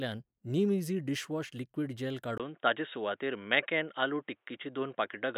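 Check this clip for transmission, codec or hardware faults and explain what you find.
One fault appears. From 2.38 s to the end, the speech abruptly turns dull and boxy, with nothing above 3.8 kHz, after a 20 ms gap. The input likely switched to a poorer device, whose narrower band and faint new noise floor replace the original pickup at roughly unchanged level.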